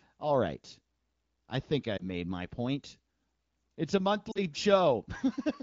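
At 1.97 to 2.09 s and again at 4.32 to 4.39 s, lost AMR speech frames make the wideband decoder stand in with the last good pitch and vocal tract settings at falling gain. The speech briefly dips or warbles, the first fitting one missing 20 ms frame, and the second, about two, drops to near silence.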